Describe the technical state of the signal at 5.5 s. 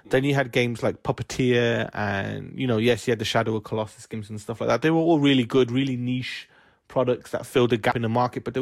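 At 5.5 s the speech signal is intact, with no audible fault at that moment.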